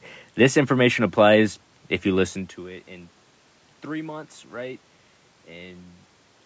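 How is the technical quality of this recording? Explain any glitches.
No glitches to explain here: the speech comes across without technical trouble, with the usual call-style microphone processing leaving nothing above about 8 kHz, some ordinary room noise in the background, and a natural shift in level around 2.5 s where the talker seems to move relative to the mic.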